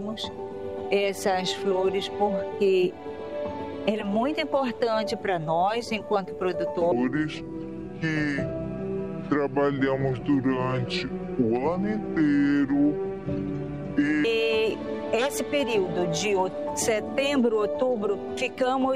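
From 6.92 s to 14.24 s there is a section at the wrong speed. The audio runs at 0.658 times its proper rate. Pitch and tempo drop together, so everything sounds deep and dragged, roughly seven semitones low. The shift arrives abruptly and ends just as abruptly. The likely cause is that this stretch was played back or edited against the wrong clock. That stretches each cycle of the waveform and lowers every frequency in the same proportion.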